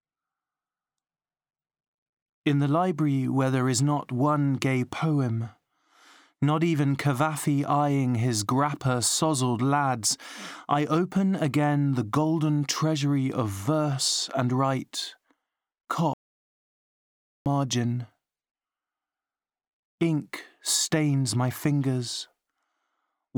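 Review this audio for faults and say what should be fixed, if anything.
There's an audio dropout to silence from 16.13 to 17.46 s: about 1.3 s of silence, no room tone, and the speech there is gone. Likely a loose connection or a brief mute upstream. Secure the cables and watch the input meters while recording.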